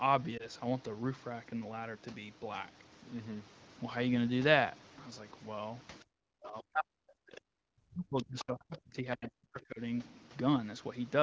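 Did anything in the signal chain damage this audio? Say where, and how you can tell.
Yes. At the network and codec stage, one AMR-WB frame failed its checksum between 0.37 and 0.47 s. That was 20 ms of lost AMR speech frames, which the decoder concealed by repeating the last good pitch and vocal tract settings at lower gain. You hear it as a short dip or warble.

In call processing, the echo canceller likely took the far end's playback for echo during double talk and turned the near talker down by about 40 dB. This speech suppressed in double talk shows up at 6.05 to 6.12 s, 6.38 to 7.35 s and 7.51 to 9.8 s, where the voice is turned down.

In the same processing stage, the other side's voice is leaking through at 7.35 to 7.41 s, 8.18 to 8.23 s, 8.39 to 8.44 s and 9.21 to 9.3 s. These are short scraps about 15 to 25 dB below the main speech, likely loudspeaker pickup the canceller did not fully remove.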